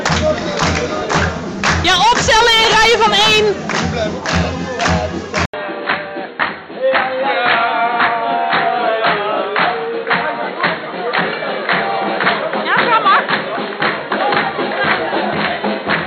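The recording input was most likely switched to a poorer device at about 5.46 s, with the system abandoning its original microphone for one that passes a much narrower band. The switch shows as a brief gap of about 80 ms. From there to the end, nothing above 4.3 kHz survives, so the audio turns dull and boxy, and a faint new noise floor sits well below the signal. The overall level stays roughly the same across the change.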